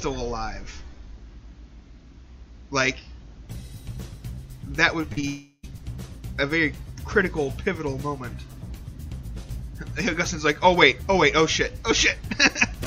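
Short concealed packet loss at 5.01–5.05 s, 5.13–5.19 s and 5.21–5.25 s: the receiver filled gaps of 20, 40 and 20 ms by extending the preceding sound, heard as brief smears or wobbles. From 5.27 to 5.65 s, the last sound carries on as a fading synthetic buzz or hiss for about 0.36 s, falls briefly silent, then resumes with part missing, likely a long network dropout.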